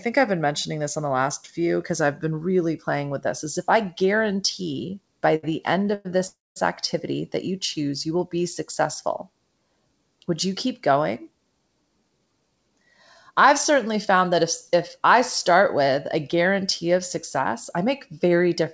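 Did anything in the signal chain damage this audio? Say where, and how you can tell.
Yes. The damage sits in the network and jitter-buffer stage of the call path.

A short stall from a late packet comes right after "if I guarantee by", at 5.36 to 5.45 s. The last sound is held for about 70 ms with a slight buzz or dip, and then the speech carries on from exactly where it stopped, so nothing is lost. A dropout would leave a hole instead. Here the sound is stretched across the wait, and everything after it arrives 70 ms later than it should.

Two call audio freezes follow, at 5.94 to 6.07 s and 6.27 to 6.58 s. The first is a 104 ms continuation of the last sound that never reaches silence. The second runs 291 ms, and about 210 ms of that fades into silence before the speech resumes intact. A stall just holds the sound briefly, while these decay into a real gap. That points to a longer hold-up in packet delivery, likely a network delay burst.

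A jitter buffer speed-up shows up three times. From 11.24 to 12.85 s the speech runs about 12% fast and roughly 0.2 s is trimmed. From 13.31 to 14.75 s, just before "I start with a", it runs 4% fast and loses about 50 ms. From 16.92 to 18.61 s, after "start with a guarantee", it runs 5% fast and loses about 70 ms. The pitch stays put, so this is pitch-period removal to drain excess buffered delay rather than a resampling error, which would raise the pitch too. The G.722 path's cut-off above 8 kHz is its normal band limit.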